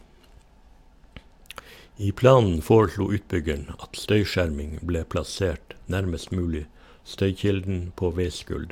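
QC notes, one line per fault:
No fault to note in this speech clip.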